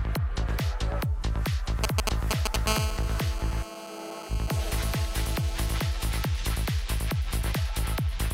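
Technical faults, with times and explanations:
1.84–2.56 s, GSM signalling bursts: a nearby 2G phone briefly exchanges control traffic with the network, sending short clusters of radio pulses at about 217 Hz. The audio circuitry rectifies these into a galloping dit-dit-dit of short 217 Hz buzzes that sit about 5 dB above the wanted sound. On a spectrogram this appears as short vertical blocks of evenly spaced harmonic lines at multiples of 217 Hz. The waveform shows groups of sharp, square-edged pulses.
2.67–5.80 s, GSM phone buzz: the phone now holds a call and transmits continuously in bursts 217 times a second. Rectification of those pulses turns them into a hard, raspy buzz at 217 Hz, about 11 dB below the signal and unrelated to it. A spectrogram shows a dense, unbroken comb of horizontal lines from 217 Hz up into several kHz for the whole span. The waveform carries a regular train of rectangular pulses riding on the audio.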